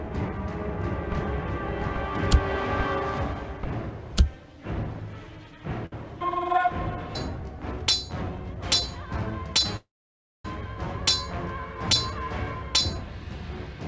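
From the very start until 2.06 s, the sound is layered over itself. A doubled audio track, likely from a second capture or an edit holding two copies, trails roughly 0.7 s behind at a few dB quieter, with no reverb. On a spectrogram the full-band pattern repeats as a shifted ghost, ending abruptly at 2.06 s.

At 5.86 s there is a short stall from a late packet. The jitter buffer ran dry, so the receiver held the last sound for 60 ms until the packet arrived, then resumed without loss. It is heard as a brief smeared hold. The waveform shows a short repetitive stretch, and the spectrogram shows horizontal streaks.

From 9.77 to 10.45 s comes a call audio freeze, likely from packets held up in transit. The last sound is drawn out into a fading buzz, then about 0.57 s of silence before playback picks up where it stopped. The waveform shows a decaying tail and then a flat line. The spectrogram shows blurred bands dissolving into an empty column. 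Throughout, the spectrogram is cut off cleanly at 8 kHz, which fits a G.722 call path at 64 kbps.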